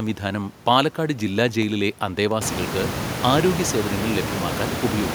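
CD scratch ticks, 1.62 to 2.48 s, after "പാലക്കാട് ജില്ലാ": six clicks, the longest about 4 ms, one per disc turn, where a scratch defeated the error correction.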